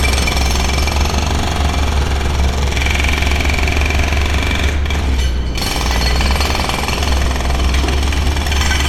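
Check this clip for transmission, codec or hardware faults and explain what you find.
No faults heard.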